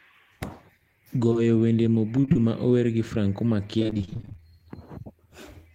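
Speech, with two back-to-back short concealed packet losses at 1.29 and 1.33 s, where the decoder stretches the last bit of sound and leaves a quick smear. Then repeated packet loss makes it choppy and robotic from 2.21 to 2.37 s and again from 3.79 to 4.44 s, with roughly half of each stretch patched over.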